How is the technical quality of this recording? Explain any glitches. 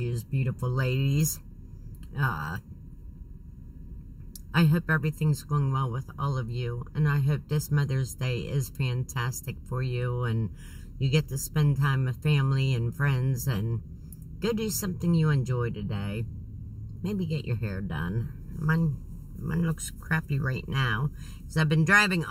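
There's one problem running throughout: channel delay (comb filtering). One side arrives slightly under a millisecond late, so the mono sum cancels near 700 Hz and upward, sounding hollow and phasey.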